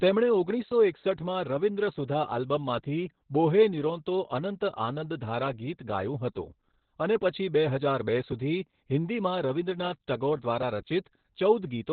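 Throughout, heavy Opus voice compression codes the speech narrowband, which fits a SILK setting near 8 kbps. Nothing remains above 4.5 kHz, so the speech sounds muffled, hoarse and faintly robotic.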